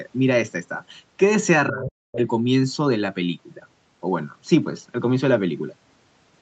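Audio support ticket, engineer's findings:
Speech suppressed in double talk, 1.69 to 2.2 s: near-end talker ducked in pieces, roughly 0.4 s affected in total, with the deepest dips cutting the level very sharply. Likely echo canceller/suppressor gating the near end while the far end was also active. Waveform shows chopped, near-silent gaps in the envelope. Spectrogram shows broadband energy collapsing in patches across the band, which stops at 8 kHz as expected for a wideband call path.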